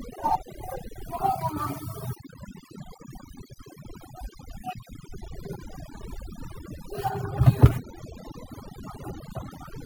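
A speech recording with overdone noise removal throughout. The reducer was set too strong. It cuts frequency bands near its noise estimate down or off. Pauses fall to near silence with twinkling specks. Quiet parts of the voice vanish too.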